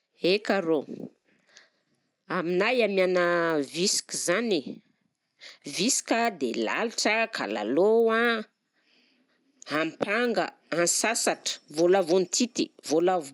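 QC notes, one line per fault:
Throughout, resampler restarted on every block: the speech carries a steady tick every 250 ms, a 4 Hz pulse heard only while there is signal. The sound points to each block being converted in isolation, likely an upsampling from 24 kHz to 48 kHz, so the filter lacks real neighbouring samples at every seam. On a spectrogram this shows as thin vertical broadband lines at even spacing. On the waveform there are small discontinuities at each block boundary.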